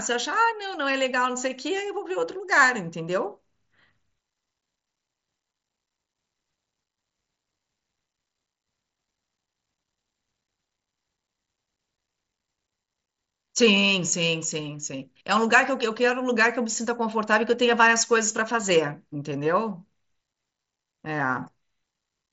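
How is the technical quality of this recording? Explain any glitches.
No glitches to report: the speech arrives over a Bluetooth mSBC headset link, so the band stops at about 7.7 kHz and the louder passages carry a light coding grain, which is simply how that codec sounds.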